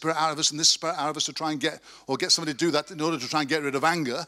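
No technical faults are audible in this speech.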